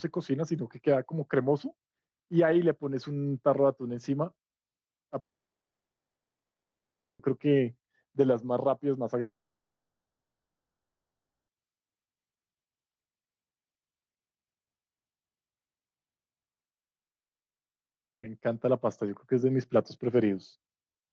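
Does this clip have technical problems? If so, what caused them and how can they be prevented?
Yes. A long network dropout occurs three times: from 5.19 to 7.20 s, from 9.20 to 11.49 s, and from 16.67 to 18.24 s. Each time the speech cuts out for about 1.6 to 2.3 s. In the first two, only the first split second carries a brief fading continuation of the last sound, then near-silence fills the gap; the third is silent throughout. The speech resumes later with the missing portion gone. This is likely packet loss on the call connection, where the receiver concealed the gap and then gave up, while the call audio itself shows a band limit near 8 kHz, which fits Opus at a low bitrate. A more stable network link, with forward error correction or redundancy enabled, would prevent these gaps.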